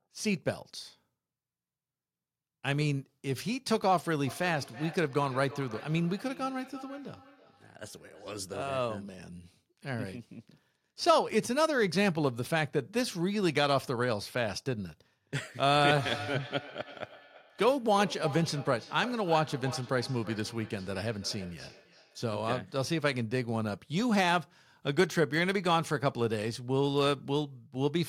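From 4.27 to 8.43 s, and again from 15.74 to 22.44 s, each word returns roughly every third of a second, thinner and ringing, peaking about 19 dB and then about 14 dB below the speech. This is feedback echo between two devices: a second device in the room replays the call, and its sound loops back through a microphone whose echo canceller ignores it.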